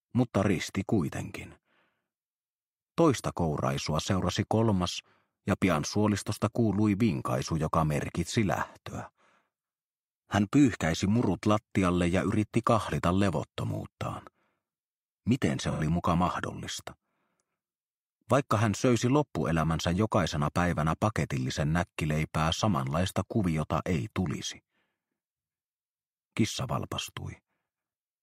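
At 15.71 s the sound turns briefly smeared and hazy, with a phasey, noise-like quality, and clears again by 15.82 s. This is AAC frame loss with concealment. For about 85 ms the decoder had no data and rebuilt the gap from the last good spectrum, reusing its energy with scrambled phase rather than the real content. A gap this short, which fits two lost frames, is patched over instead of fading to silence.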